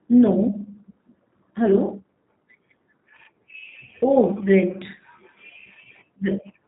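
Throughout, the speech passes through a G.729 codec, which fits an 8 kbit/s stream, so nothing above 3.8 kHz survives and the voice sounds plainly rough and synthetic.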